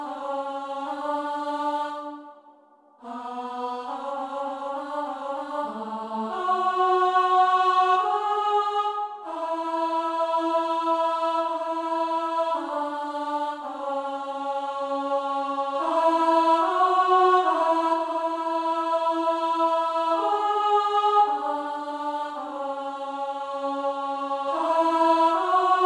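No technical faults can be heard anywhere in this audio. Nothing in it stands out as needing repair.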